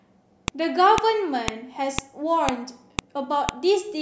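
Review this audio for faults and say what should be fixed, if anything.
There's a file header played as audio: sharp clicks at 0.48, 0.98, 1.48, 1.99, 2.49, 2.99 and 3.49 s, one every half second. The speech was joined from 0.5 s WAV chunks, and each chunk's header bytes got played as samples. Strip the header from every chunk after the first before concatenating or streaming.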